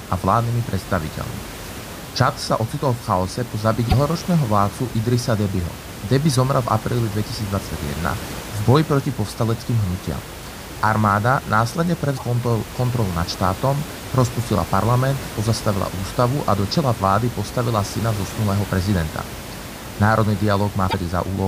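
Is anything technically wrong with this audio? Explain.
Yes. Damaged data in a compressed stream occurs at 3.85 to 3.94 s, 12.14 to 12.22 s and 20.86 to 20.94 s, each lasting about 80 ms. Corrupted bytes make the decoder misread frames and lose sync until it finds the next valid frame header, producing a short chirp, squawk, click or short hole in the speech. The room noise, about 13 dB below the speech, is part of the recording, not a fault.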